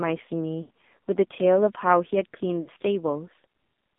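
Throughout, the speech carries the AMR narrowband mobile codec. The band runs only from 200 Hz to 3.7 kHz. Heavy damage makes it buzzy and synthetic. That fits a low mode near 5.9 kbps, where few pulses model each frame.

From 0.62 to 0.70 s, lost AMR speech frames cut about 80 ms. The decoder repeats the last good settings at falling gain. The sound smears and sags. At 2.62 to 2.70 s, a shorter 40 ms loss gives a brief warbling dip.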